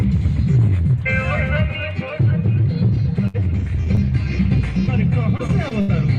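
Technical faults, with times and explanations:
3.27 to 3.36 s, burst of packet loss: about 60 ms of audio never arrived in time, so the receiver extended the preceding sound for roughly 63 ms while fading it, then jumped ahead. One sustained, dimming patch with a skip distinguishes it from brief smears.
3.84 to 3.89 s and 3.95 to 3.99 s, short concealed packet loss: two separate holes of about 20 ms each were bridged by continuing the last sound, then blended back, heard as quick smears or wobbles. At the first, a further 10 ms was dropped to catch up.
5.37 to 5.90 s, repeated packet loss (robotic sound): four gaps in about half a second, the longest 76 ms, left roughly a quarter of the stretch patched and about 140 ms missing. Repeated patching close together gives a choppy texture rather than one isolated glitch.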